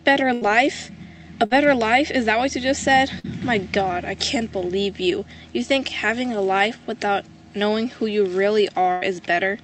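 A held buzz or fading hiss replaces the sound at 0.33–0.43 s, 1.45–1.53 s, 3.19–3.26 s and 8.92–9.03 s, after which the audio resumes slightly further on. These are bursts of packet loss: roughly 40 to 100 ms of audio never arrived in time, so the receiver stretched and faded the last sound to cover each gap and then skipped past the lost stretch.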